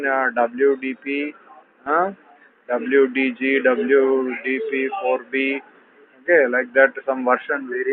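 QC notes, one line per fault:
Nothing stood out on listening, so there is nothing to log for this clip.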